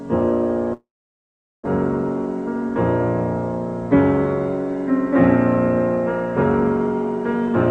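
A long network dropout runs from 0.73 to 1.68 s, likely caused by packets failing to arrive over the call path. The receiver briefly stretches the last sound into a fading buzz or hiss, then leaves about 0.79 s of near silence while nothing new is available. About 0.6 s of audio is never played, and when sound resumes it jumps ahead, with roughly a third of a second of shift in timing. The band limit near 12 kHz fits an Opus stream at about 48 kbps.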